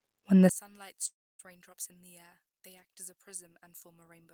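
From 0.49 s to the end, the speech collapses by about 25 dB into a faint residue, as if its centre were scooped out. That is the signature of one channel inverted, likely a polarity flip cancelling the shared centre on a mono sum, rather than a plain gain drop, which would keep the sound's body.

At 1.07 s a long network dropout likely follows. The last sound is stretched into a fading buzz, then silence for about 0.27 s, and the speech resumes at 1.41 s with roughly a third of a second gone. Unlike a brief click or skip, it shows a decaying fill, a real gap and lost material.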